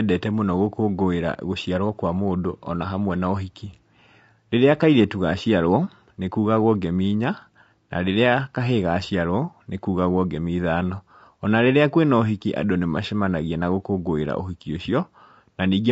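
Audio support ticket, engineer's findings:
Speech rough and grainy throughout; noise filling gaps between voice harmonics, top band dulled and synthetic. Likely low-delay AAC compression (AAC-ELD): short frames smear pitch structure, low bitrate starves bits; damage level fits a low bitrate around 32 kb/s.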